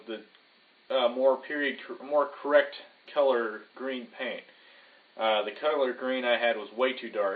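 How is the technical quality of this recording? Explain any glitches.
No glitches turn up anywhere in this recording, and its signal holds steady throughout with no dropouts, clipping or other technical faults to point to.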